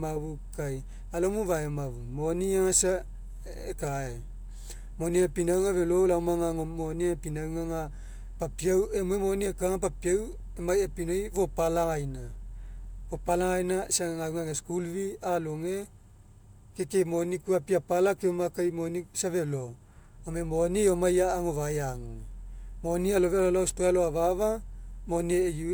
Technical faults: none

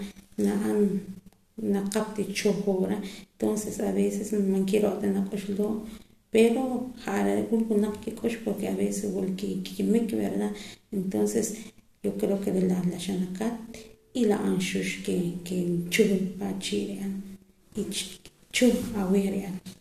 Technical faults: none

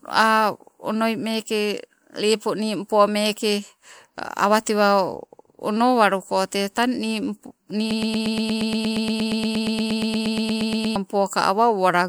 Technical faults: broken-record loop

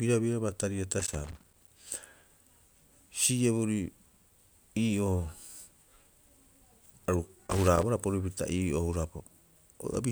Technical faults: loose connector crackle

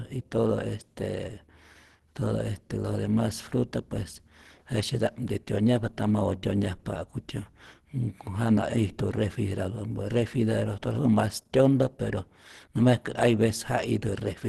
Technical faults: Opus compression

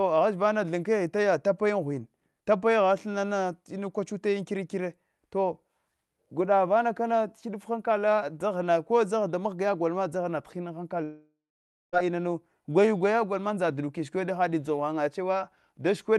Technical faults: long network dropout

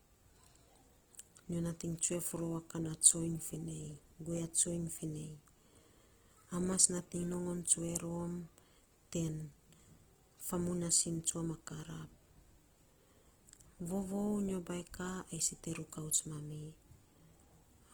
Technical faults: Opus compression

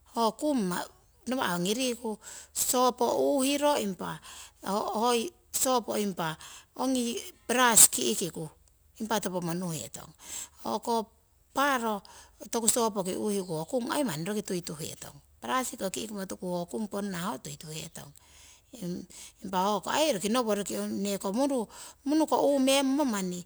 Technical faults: crude rate conversion

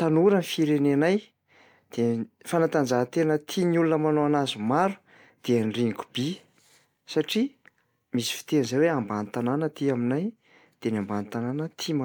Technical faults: none

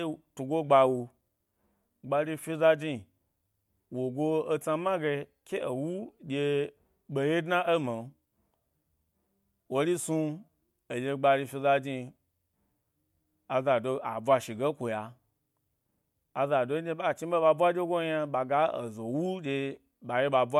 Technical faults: none

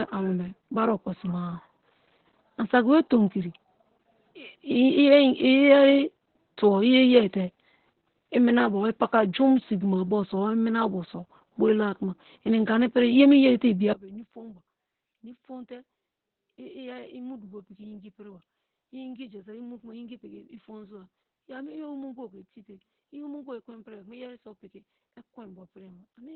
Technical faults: Opus voice compression; one channel inverted

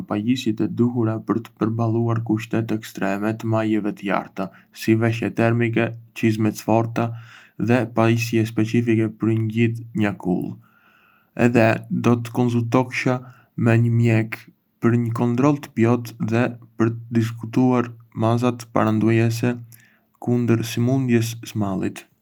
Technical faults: none

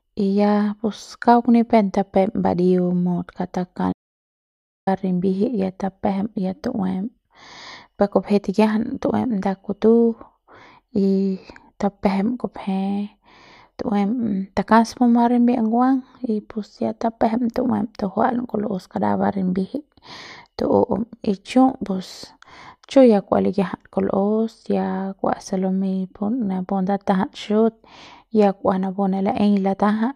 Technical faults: audio dropout to silence

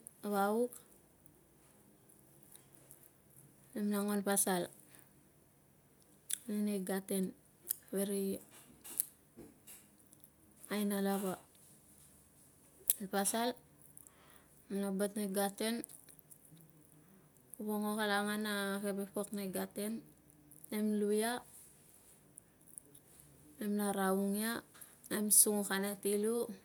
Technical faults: none

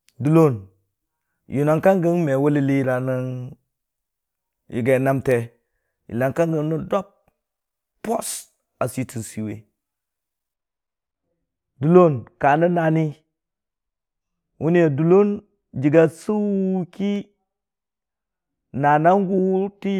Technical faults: de-emphasis applied wrongly

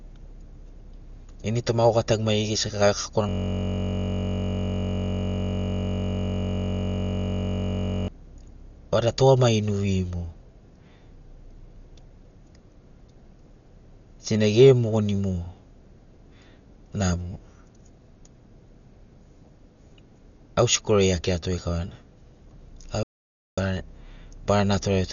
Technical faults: Dolby Digital compression; system hang loop; audio dropout to silence

